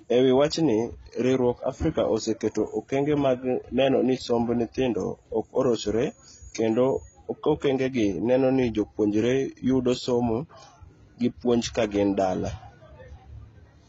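From start to finish the speech sounds dull and muffled, with nothing above 7.6 kHz and two different layers of coding artefacts heard at once. This points to transcoding between lossy codecs, likely a low-rate AAC-LC encode re-encoded as HE-AAC near 20 kbit/s.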